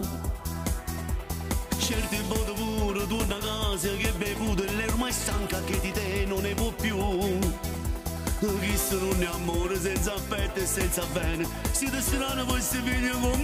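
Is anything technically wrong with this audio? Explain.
Yes, there are two separate faults.

From 3.15 to 3.49 s there is processor overload crackle. The processor kept missing its deadlines for very short buffers, on the order of 1.5 ms each, and around ten of them in quick succession were filled with stale audio instead of fresh output. Each repeated fragment starts and stops abruptly, so the sound takes on a gritty, torn texture for about a third of a second. Unlike a click train, it is a dense smear of jagged edges rather than separate ticks, and it stops as soon as the load eases.

From 4.46 to 7.16 s there is a train of clicks: about forty short, similarly shaped pulses at roughly 14.5 per second, spaced unevenly, with peaks about as loud as the audio itself. The cause is likely electrical interference or a faulty connection or power supply, injecting pulses into the signal. It sounds like distinct ticking or popping laid over the sound. 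Each click stands apart and keeps its shape, which separates it from the smeared, gritty overload crackle earlier.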